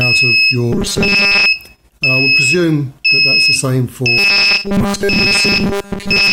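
From 0.73 to 1.46 s and again from 4.18 s to the end, the sound becomes a rigid 200 Hz metallic buzz: robotic sound from repeated short buffers, likely a 5 ms chunk replayed while most real audio is skipped. Unlike a dropout, it never goes silent.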